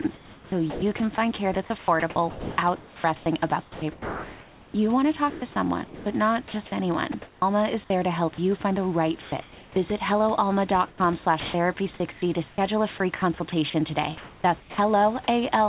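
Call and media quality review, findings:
Sound chopped by the voice detector, 0.02–7.42 s, ending just before "is there to help": about 2.6 s of quiet syllables and word edges swapped for comfort noise. Likely sender VAD/DTX toggling repeatedly.

Sound chopped by the voice detector, 10.88–14.78 s: same choppy pattern, about 1.06 s replaced by synthetic fill. Sender VAD repeatedly dropping low-level speech, likely with comfort noise filling the gaps.

Comfort noise in place of the background, 9.22–9.76 s, after "you find the right": about 0.44 s of real room noise replaced by flat, featureless hiss. Likely DTX pause with receiver-generated comfort noise.

Onset clipped by the voice detector, 9.74 s: speech resumes abruptly, with about 20 ms of its attack missing. Detector was slow to reopen, likely causing the sender to leave the onset untransmitted. Within a G.711 path limited to 4 kHz.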